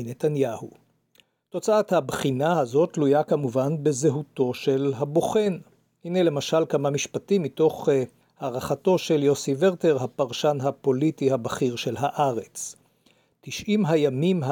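The signal carries no audible technical faults at any point.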